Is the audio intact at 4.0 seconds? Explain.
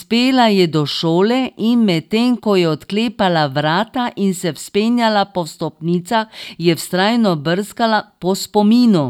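Yes, the speech at 4.0 seconds plays through cleanly, with no dropout, click, distortion or other fault audible at that point.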